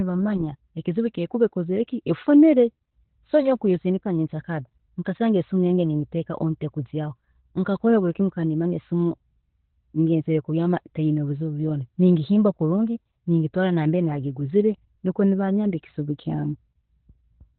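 From start to finish the speech carries Opus voice compression, with nothing above about 4.3 kHz and a hoarse, slightly robotic grain from coarsely coded excitation, which fits narrowband SILK at around 8 kbps. That roughness is what separates it from simple low-pass filtering, which would only muffle.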